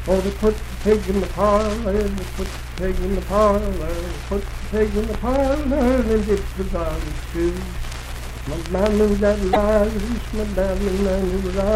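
At 9.50 to 9.57 s there's damaged data in the compressed stream: the decoder hits corrupt frames, loses sync, and spits out a short glitch.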